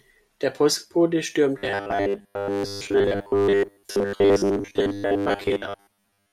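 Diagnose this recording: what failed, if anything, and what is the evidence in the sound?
From 1.58 s to the end of the clip at 6.32 s, the speech becomes a rigid, metallic buzz pitched at 100 Hz, still loosely tracking the syllables. This is robotic sound from repeated short buffers, likely a driver or buffer underrun: audio arrives too late, so a 10 ms block is replayed in place of most of the incoming signal. A spectrogram would show flat harmonics every 100 Hz, and the waveform would show one short segment tiling over and over.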